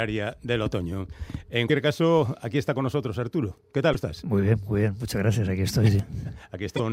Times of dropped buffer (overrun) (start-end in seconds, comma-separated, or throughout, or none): 6.00